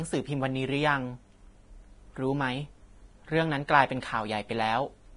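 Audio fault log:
Throughout, Vorbis compression: the encoder appears to have been starved of bits, which fits a low rate of around 30 kbps, so it has discarded everything above about 10.6 kHz and quantised the remaining treble residue very coarsely, likely a heavy low-quality Vorbis encode. With no fine spectral detail left, the upper band is filled with noise-like energy instead, so the speech sounds dull at the top yet hissy and grainy, with roughened tones and smeared consonant attacks.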